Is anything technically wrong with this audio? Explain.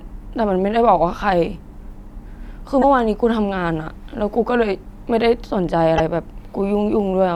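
Yes. The speech jumps abruptly twice, at 2.81 to 2.84 s and again at 5.97 to 6.00 s, each time with a glitch about 30 ms long, roughly one 26.1 ms MP3 frame. This is likely a broken MP3 bit reservoir: frames were lost, and the frame that followed each cut reached back into earlier frames for data it had stored there, found the wrong bytes, and decoded them wrongly before the audio resumed further ahead.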